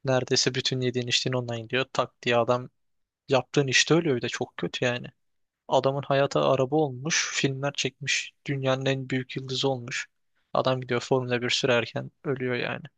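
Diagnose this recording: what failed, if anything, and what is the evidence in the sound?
Nothing failed in this recording, and there is no evidence in the sound of any fault at any stage.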